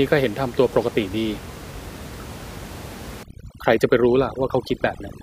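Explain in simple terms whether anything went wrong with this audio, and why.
Overdone noise removal from 3.23 s onward: an over-strong noise filter strips quiet parts of the voice along with the room noise, leaving the background broken into twinkling, warbling specks.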